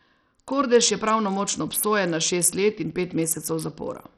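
The audio was likely squeezed through Bluetooth SBC compression at a very small bit budget, one that fits a rate near 64 kbps, and the damage is heavy for the whole of the speech. With so few bits to share across its sub-bands, the encoder starves the upper bands and quantises the rest coarsely. The treble thins out and flickers in and out, while a gritty, grainy noise and aliasing cling to the voice from start to finish.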